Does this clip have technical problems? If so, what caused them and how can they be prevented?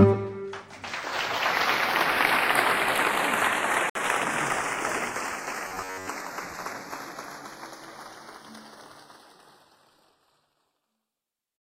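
Yes. Throughout the clip the two channels are drifting apart: the sound has a slow flanging quality in mono because the inter-channel delay creeps to a fraction of a millisecond. This points to two devices on separate clocks differing by a few tens of ppm. On a mono-summed spectrogram, comb notches sweep slowly. Recording both channels from one device or one shared clock prevents it.

From 3.90 to 3.96 s the sound cuts to 57 ms of silence, then resumes. This is likely a Bluetooth stall, where delayed packets left the headphone buffer empty. The waveform shows a flat gap, and the spectrogram a blank vertical strip. Reducing radio interference or using a wired connection prevents it.

From 5.68 to 6.09 s the sound turns into a rigid, metallic buzz at 93.8 Hz. This is likely robotic sound from repeated short buffers: a roughly 10.7 ms chunk is replayed while most of the real audio is skipped. 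The spectrogram shows evenly spaced horizontal harmonics, and the waveform a repeating block pattern. Larger buffers and a less loaded audio path prevent it.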